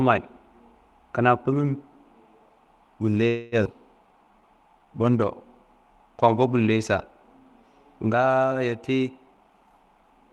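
At 3.27 s the speech stops moving forward. For about 0.28 s the last sound is stretched into a fading buzz or hiss. It does not drop to silence. This is a call audio freeze, most likely caused by packets held up in transit while the jitter buffer ran dry. The receiver kept extending what it had. When the audio resumes at 3.55 s, it continues from where it stopped. Nothing is lost, but about 247 ms of delay has been added.

Shortly after, at 3.64 s, the speech skips ahead. A brief join of about 11 ms replaces roughly 150 ms of audio that never plays. The two sides of the cut are butted almost directly together. Later audio was already queued, so the dropped stretch was simply passed over. This also takes back most of the delay the freeze had built up.

From 4.07 s to 5.26 s there is a jitter buffer slow-down. Playback runs at 88% speed, with the pitch unchanged. The buffer was running low or had just raised its target delay, so the receiver repeated single pitch periods and pieces of pauses many times in a row. 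Together these add 152 ms. Sounds are drawn out, and the pacing drags for just over a second.

From 9.26 s to the end of the clip there is a jitter buffer speed-up. The buffer was holding more audio than its target. The receiver cut short slices of one or a few pitch periods, over and over, removing about 150 ms in total. The speech runs at 115% speed at the same pitch and sounds hurried. Throughout, the high end stops near 12 kHz, which fits an Opus call path at around 32 kbps.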